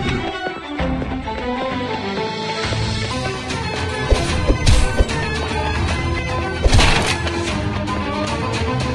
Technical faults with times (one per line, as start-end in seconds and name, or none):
3.11-8.95 section at the wrong speed